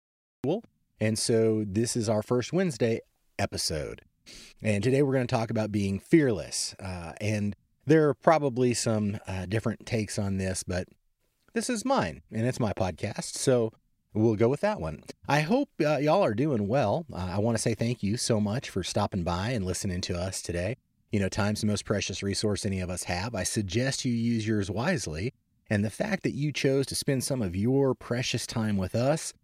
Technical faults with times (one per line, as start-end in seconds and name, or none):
0.00-0.44 cut-off start